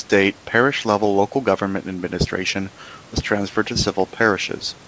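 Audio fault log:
No faults heard; the speech band ends near 8 kHz.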